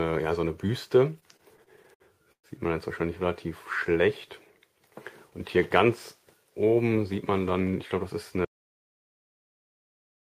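From 1.19 to 2.46 s, packets kept arriving late, so the jitter buffer ran dry nine times, causing repeated stalls (stutter). The receiver stretched the last sound to fill about 283 ms, the longest wait 116 ms, so the passage drags and hiccups while nothing is lost.

At 8.45 s the input likely disconnected or was muted while recording carried on writing silence, an audio dropout to silence. The sound cuts off abruptly, with no room tone at all, and stays dead silent through to the end.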